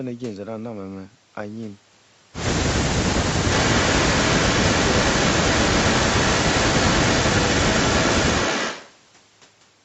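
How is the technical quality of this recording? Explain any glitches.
The recording has one clear glitch, an echo leak, heard over sound that stops at 8 kHz as a call path would. From 3.5 s to 8.93 s, a second copy of the speech trails about 248 ms behind, nearly as loud as the original. It is likely caused by a far-end speakerphone whose echo canceller let its pickup through.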